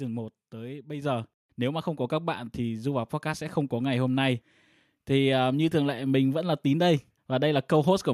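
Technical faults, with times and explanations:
1.02 s, microphone volume stepped up: right after "tới bây" the whole signal jumps about 6 dB louder in one go, voice and room noise together. That's the call software deciding the mic was too quiet and bumping the device's input level.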